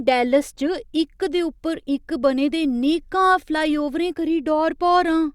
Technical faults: none

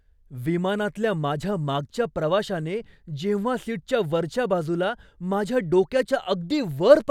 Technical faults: none

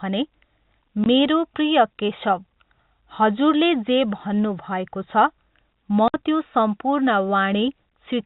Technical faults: packet loss filled with silence

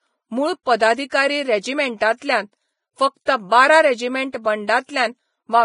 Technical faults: Vorbis compression; pre-echo

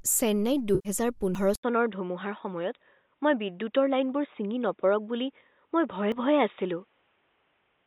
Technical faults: AAC frame loss with concealment; dropped buffer (overrun); input switched to a poorer device

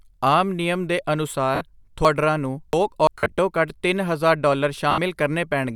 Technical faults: lost LE Audio frames; chunks out of order

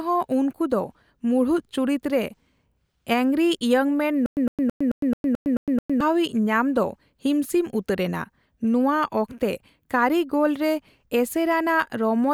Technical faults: stutter with silent gaps

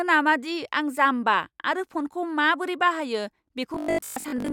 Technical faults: robotic sound from repeated short buffers

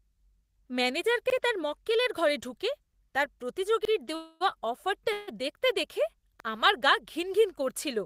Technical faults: overlapping chunks; call audio freeze

